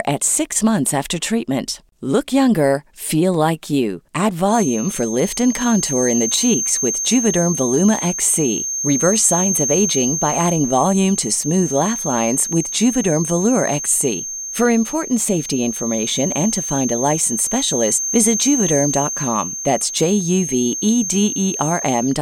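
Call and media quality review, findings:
Feedback whistle: thin steady 6.4 kHz tone, slightly wavering, a few dB under the speech, from 4.44 s to end of clip. Likely speaker-to-mic loop held at threshold, not running away.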